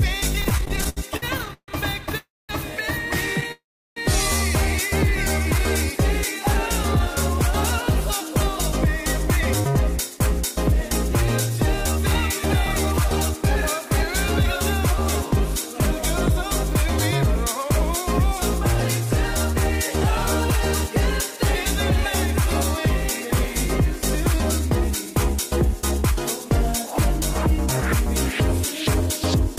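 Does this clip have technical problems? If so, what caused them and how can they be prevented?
Yes. Repeated stalls (stutter) run from 0.41 to 2.15 s, with 21 short gaps (the longest 147 ms) filling about a quarter of that span, and again from 3.41 to 3.52 s with three tiny gaps. Late packets kept draining the jitter buffer, and the receiver stretched the last sound each time, so the audio drags unevenly. A larger or adaptive jitter buffer and a steadier network path with less queuing would prevent this.

Call audio freezes follow at 2.17 to 2.51 s and 3.52 to 3.98 s. The sound holds and fades, then goes silent for about 210 ms and 340 ms before resuming where it stopped, adding 316 ms and 446 ms of delay. The likely cause is packets held up in transit. Prioritising voice traffic (QoS) and avoiding congested or wireless links would prevent this.

Jitter buffer speed-up runs from 8.86 to 14.44 s and from 19.00 to 29.40 s. 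The audio plays at about 103% speed with unchanged pitch. Short pitch-period slices were trimmed repeatedly to shed excess buffered audio, roughly a fifth of a second and about 0.3 s. Preventing the build-up, or letting the buffer drain more gently, would avoid this.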